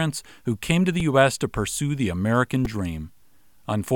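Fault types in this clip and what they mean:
Repeated buffer: at 1.0 s and again at 2.65 s, new audio failed to arrive in time, so the output replayed its last short block instead of moving on. Each repeated piece lasts about 2.67 ms, which fits a 128-sample buffer. It plays two extra times at 1.0 s and three extra times at 2.65 s. Because the piece is so short, each event is heard as a brief click or buzz rather than a stutter, and a few milliseconds of speech are lost each time.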